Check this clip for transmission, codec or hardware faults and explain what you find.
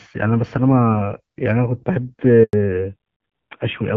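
Two faults occur together at about 2.4 to 2.5 s: a brief dropout followed by a lasting loss of bandwidth. Before that, the HD Voice (AMR-WB) path carries the speech with only light coding damage.

Handover gap, 2.43 to 2.53 s: the speech falls away to silence for 100 ms while the call switches networks and no frames arrive. Packet-loss concealment would fill short losses with smeared or repeated sound. Here the dropout is clean silence, and the speech in that span is lost.

Fallback to narrowband, 2.53 s to the end: when the speech resumes, nothing remains above 4 kHz, so it sounds duller and rougher. The coarse texture points to a low-rate narrowband codec around 7.4 kbit/s. A plain low-pass filter would dull the speech without roughening it, and this change starts exactly at the handover.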